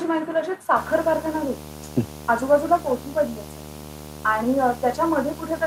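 From 0.76 s to the end of the clip, a screen or video cable is coupling its signal into the audio path, a video or display buzz. It adds a harsh 75 Hz buzz at the picture's field rate, topped with gritty hash, sitting fairly prominently beneath the sound.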